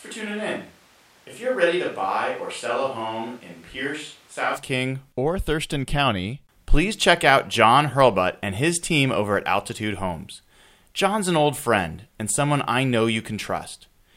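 Speech opens roomy, hollow and bass-light, about 5 dB quieter with more room noise, then snaps close at 4.55 s, likely a switch to a distant microphone rather than added reverb.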